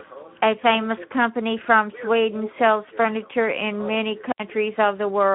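A speech recording carries Speex codec damage throughout: hoarse, noisy, plainly coded texture consistent with roughly 11 kbps, and a spectrogram showing energy confined between 150 Hz and 3.6 kHz. An intermittent contact from 4.29 to 4.42 s opens the line for about 75 ms, showing as a waveform gap with crackle spikes at both edges and faint hiss between.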